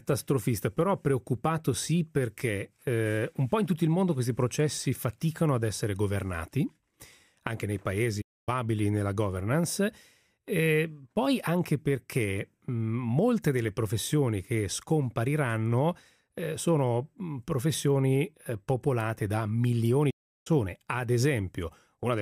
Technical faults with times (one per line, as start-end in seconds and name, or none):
8.21-8.49 playback stall
20.10-20.47 playback stall